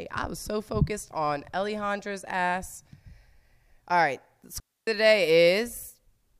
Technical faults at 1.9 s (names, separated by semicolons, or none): none